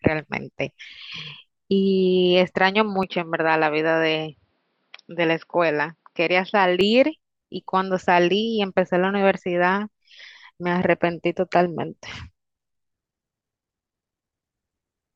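A speech recording where the input likely switched to a poorer device from 3.03 to 6.81 s, dulling the sound with nothing above 5.6 kHz and adding faint new background noise.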